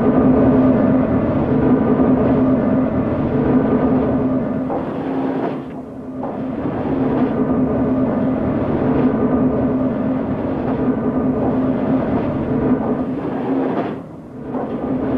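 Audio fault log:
No faults heard anywhere in this recording.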